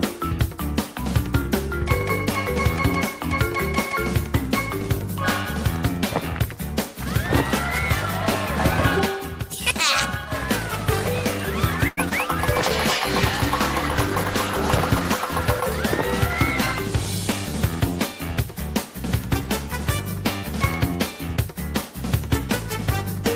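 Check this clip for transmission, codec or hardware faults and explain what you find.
Four transmission faults are audible, clustered between about 11.9 and 17.5 s.

From 11.87 to 11.99 s there is a short stall from a late packet. A packet arrived late, so the jitter buffer ran dry and the receiver kept extending the last sound for about 98 ms until the data turned up. Playback then resumed from the same point, so nothing is lost. The sound simply hangs for a tenth of a second, and everything after it runs that much later.

From 12.09 to 12.13 s there is a short concealed packet loss. About 20 ms of audio never reached the decoder in time. The receiver covered the gap by carrying the preceding sound forward and then blending back into the real signal. What you hear is a brief smear or wobble, and whatever fell in that 20 ms window is gone, not just delayed.

From 12.56 to 16.16 s there is a call bitrate drop. 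The network's bandwidth estimate fell, and the encoder was pushed onto a much leaner budget. The coarseness of the sound fits a fall from around 32 kbps to 13 kbps, held at the bottom for roughly 2.5 s. With that few bits the coding gets rough and watery, and the top end is trimmed, so the audio turns audibly muffled until quality climbs back.

From 16.72 to 17.47 s there is a jitter buffer speed-up. The buffer had built up more delay than it targets, so the receiver repeatedly cut out tiny pitch-period-length slices to catch up. Over those three quarters of a second it removed around a tenth of a second in total, playing about 10% fast. Pitch stays put, but the audio sounds rushed.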